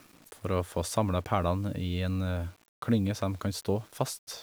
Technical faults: low bit depth without dither

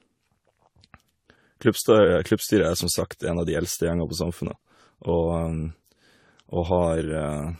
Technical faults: generation loss

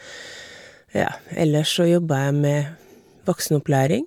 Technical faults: none

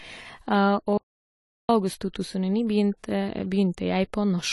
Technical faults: AAC compression; audio dropout to silence

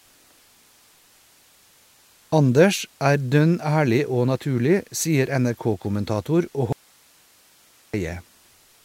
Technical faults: audio dropout to a faint residue

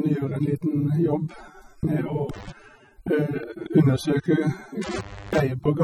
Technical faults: AAC compression; intermittent contact

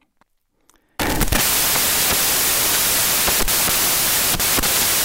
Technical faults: samples built from the wrong bytes

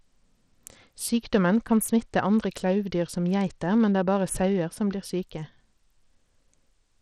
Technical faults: Bluetooth SBC compression

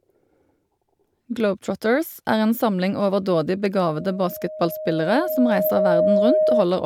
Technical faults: loudspeaker feedback squeal

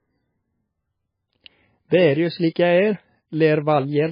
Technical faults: MP3 compression

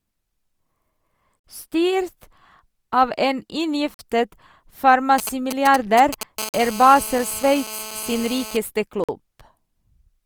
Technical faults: gap between chunks; GSM signalling bursts; GSM phone buzz

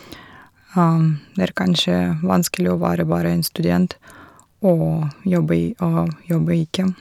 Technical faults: hard clipping

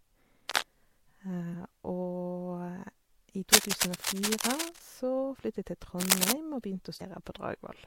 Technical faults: cable scratch noise

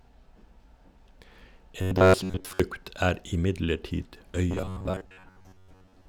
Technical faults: robotic sound from repeated short buffers

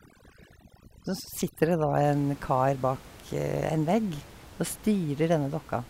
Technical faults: overdone noise removal

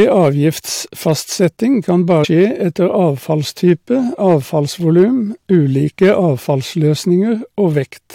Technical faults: hard clipping; damaged data in a compressed stream

